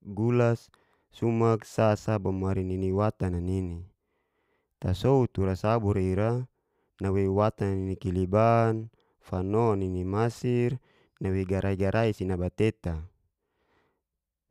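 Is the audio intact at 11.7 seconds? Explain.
Yes, the speech is intact at 11.7 seconds, with no audible dropout, click, distortion or other fault at that moment.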